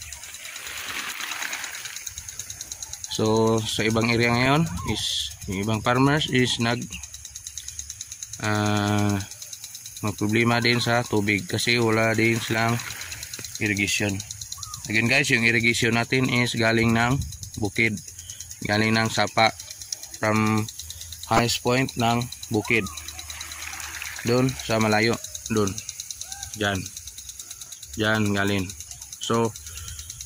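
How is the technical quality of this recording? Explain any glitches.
One short glitch stands out. From 21.32 to 21.39 s there is DAB burbling: weak reception let bit errors, roughly 0.2 percent, slip past error correction, corrupting the audio data so single sub-bands get short blips of noise. The 68 ms length fits about three frames. It sounds like a brief burble laid over the sound, not a silent dropout like lost packets.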